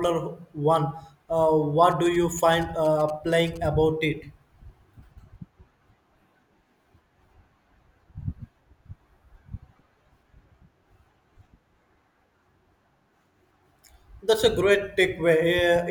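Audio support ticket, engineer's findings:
GSM signalling bursts, 1.91 to 3.58 s. Galloping dit-dit-dit of short buzzes at about 217 Hz, roughly 25 dB under the speech. Nearby 2G phone signalling before a call or text. Audio circuit rectifies the RF bursts into audible pulses.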